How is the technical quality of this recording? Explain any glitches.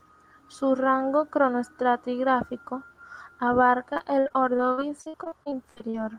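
The recording has one clear glitch. From 3.93 to 5.96 s, repeated packet loss gives robotic sound: a rapid series of dropouts up to 68 ms long, patched by extending the previous sound, covering about a quarter of that stretch. It sounds choppy, and a spectrogram shows smeared, repeated frames broken by vertical seams.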